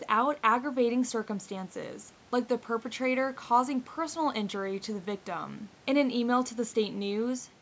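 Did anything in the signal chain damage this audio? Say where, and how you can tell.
No, the speech shows no damage from any stage of the chain: the lowest bass is trimmed, as expected from a call's microphone processing, and the room's background noise sits about 32 dB below the speech.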